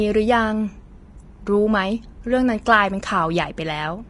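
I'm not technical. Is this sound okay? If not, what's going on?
No. The speech was likely squeezed too hard by Vorbis compression, which saves space by keeping only a rough outline of the sound. Throughout, nothing above 10.6 kHz survives, and the remaining treble turns hissy and grainy, leaving sounds rough and blurred.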